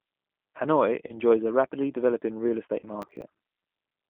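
Speech runs through the G.729 codec the whole way, confined to roughly 200 Hz to 3.4 kHz with a rough, synthetic grain rather than simple muffling, which fits an 8 kbit/s call. VoIP packet loss concealed by the speech codec appears at 1.07–1.19 s and 2.79–2.87 s: instead of silence, the sound smears out and fades and recovers weakly, pointing to roughly one then two lost packets. Processor overload crackle at 3.02–3.22 s differs as gritty tearing, with scraps of old audio repeated at hard edges, consistent with several missed buffers of about 10 ms each.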